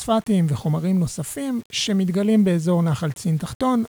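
From start to end, the speech carries a grainy, rough distortion. It is low bit depth without dither. The grit sits roughly 30 dB below the voice and moves with it. It thickens on soft syllables and tails. The quietest moments sputter or drop out instead of fading smoothly. The cause is likely coarse rounding to very few levels, which fits a 7-bit signal. No dither breaks up the error, so it tracks the waveform.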